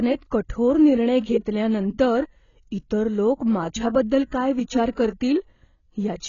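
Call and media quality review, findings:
Dull, smeared speech throughout, nothing above 7.1 kHz; likely AAC compression at a low bitrate, fitting roughly 16 kbps, cutting bandwidth and coarsely quantising spectral lines.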